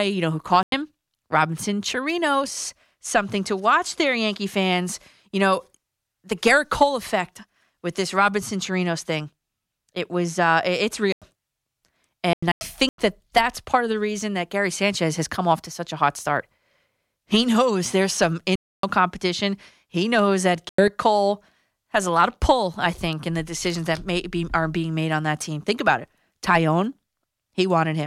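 The speech cuts to dead silence five times, each a corrupt frame muted: the decoder rejected damaged frames and the player filled the gap with nothing. Holes at 0.63 s after "you know who", 11.12 s after "it was uh it's", 12.33 s (0.65 s long, before "that that's part of"), 18.56 s and 20.56 s. Timing holds throughout.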